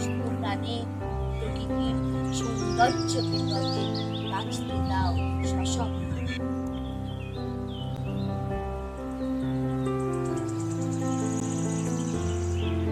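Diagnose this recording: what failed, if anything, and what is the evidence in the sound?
The driver or buffer stage failed. At 7.96 s and 11.40 s the sound drops to digital silence, each time for about 11.6 ms, and returns with no fade, so each hole is heard as a short tick. The identical length of both gaps fits a 512-sample buffer that was not filled in time, so zeros went out instead. This is a block of digital silence, not network loss: there is no concealment, smearing or repeated material, only a hard, silent gap.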